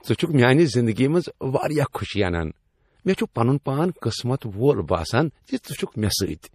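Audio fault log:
Throughout, low-bitrate audio saved at a high bitrate: the speech has the smeared, swirly texture of a heavily squeezed MP3, and nothing sits above 15 kHz, yet the file is encoded at a generous rate. That mix points to a likely earlier pass through a low-rate MP3 encoder, something around 40 kbit/s, before a re-save near 270 kbit/s. The second encode keeps the damage intact but can't rebuild the missing top end or the detail the first one threw away.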